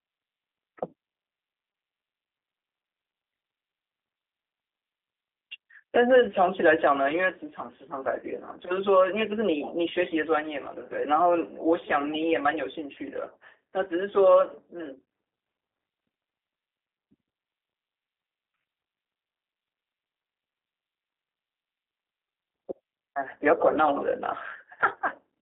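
From start to finish the speech carries G.729 codec damage, and it is plainly audible. Nothing reaches above about 3.6 kHz, and the low end thins below 300 Hz. A plain telephone band-limit would only sound muffled. Here the voice also has a rough, synthetic edge. That comes from speech rebuilt out of a vocal-tract filter, a pitch predictor and sparse pulses per 10 ms frame, which fits an 8 kbit/s coder.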